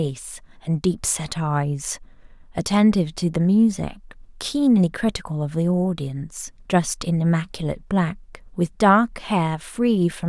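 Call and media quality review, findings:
Nothing stood out on listening to the speech recording; no finding to raise against any component.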